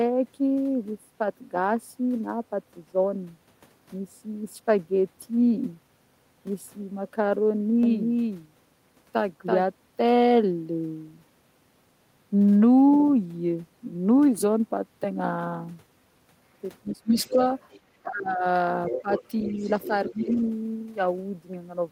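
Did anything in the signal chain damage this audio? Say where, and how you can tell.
Yes. From 7.83 to 9.63 s there is a doubled audio track. A full-band copy trails the original by roughly 300 ms, about 5 dB quieter, with no room decay. It starts and stops abruptly. The likely cause is a second capture path or an edit holding two copies.

Speech suppressed in double talk appears at 16.83 to 17.38, 18.02 to 18.44, 19.02 to 19.08 and 19.87 to 20.38 s. The talker dips by as much as roughly 25 dB. This likely comes from the echo canceller in call processing ducking both voices at once.

The other side's voice leaks through at 16.88 to 17.33, 17.71 to 17.79 and 18.88 to 20.38 s. It sits about 15 dB under the talker, and about 30 dB under in the short scrap. This is likely residual loudspeaker echo that the canceller missed.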